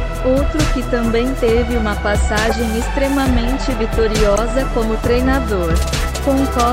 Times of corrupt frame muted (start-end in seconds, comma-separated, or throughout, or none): 4.34-4.38